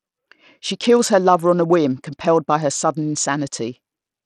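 Speech runs through the whole clip with plainly audible damage that is likely from Bluetooth SBC compression at a low bit pool, consistent with a rate of around 80 kbps. Across all of it the upper treble thins out and flickers as the top sub-bands lose their bits, while coarse quantisation in the remaining bands leaves a gritty noise and aliasing riding on the sound.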